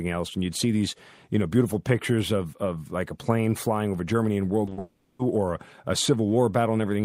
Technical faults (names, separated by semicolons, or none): short concealed packet loss; long network dropout